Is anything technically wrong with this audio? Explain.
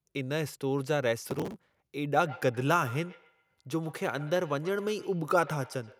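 Yes, there are two faults.

Processor overload crackle, from 1.22 to 1.80 s. The processor falls behind and misses many buffer deadlines in a row, dozens of them, which fits very short buffers of around a millisecond and a half. Each missed buffer is skipped, leaving a tiny hard-edged gap, and this run of gaps is heard as a burst of gritty crackle tearing across the speech for just over half a second before the sound clears.

Feedback echo between two devices, from 2.14 s to the end of the clip. Two devices in the same room are on one call, so one plays back what the other's microphone sent, and that microphone picks it up again. Each device's echo canceller removes only its own playback, so this returning sound passes through. The speech is followed by a faint repeat, about a tenth of a second behind, peaking at about 19 dB below the speech.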